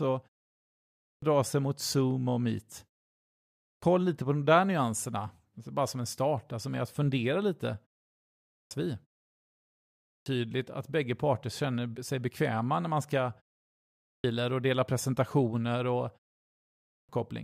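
Every time the speech comes back after a short pause, the output device seems to have dozed off and needs a moment to wake up again, so you get a clipped start after a pause. It happens at 0.63 s (just before "dra sig mot"), 3.29, 8.18, 9.65 (before "att bägge parter känner"), 13.7 and 16.49 s (right after "och dela presentationer och"). Each time, roughly 0.53 to 0.61 s of sound is swallowed after gaps of only 0.37 to 0.67 s, so the phrases jump in abruptly, already under way.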